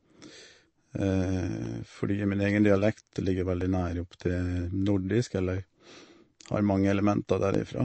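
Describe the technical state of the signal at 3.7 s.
Clock drift buffer slips occur from 1.66 to 7.55 s, one about every 1.97 s, with one close to 3.7 s. The click likely comes from two mismatched clocks dropping or repeating a few tens of samples. MP3 compression runs throughout, including 3.7 s. Nothing sounds above 8.3 kHz, and watery, swirly artefacts are plainly audible, likely from a low bitrate around 35 kbps.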